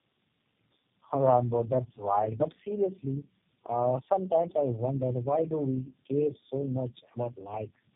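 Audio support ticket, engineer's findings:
Tandem speech coding throughout: sound points to three low-rate speech codecs in series, each re-encoding degraded output; compounded roughness, muffling, warble; nothing above 3.7 kHz.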